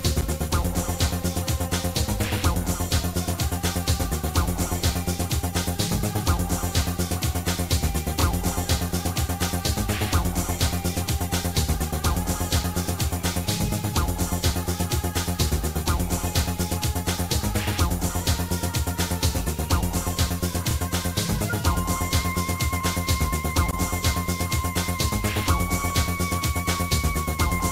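Nothing here needs flagging; I couldn't catch a single technical fault anywhere in this recording.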